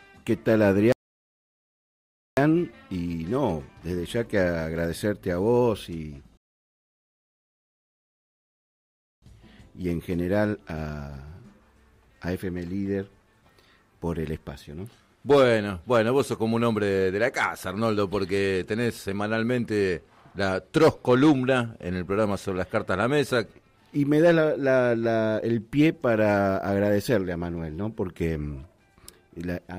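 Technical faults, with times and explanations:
0.92–2.37 s and 6.37–9.22 s, rebuffering stall: the sound drops to silence for about 1.4 s, then 2.8 s, and picks up exactly where it stopped, with nothing missing. The player ran out of downloaded audio and paused until more data arrived, adding time without losing any.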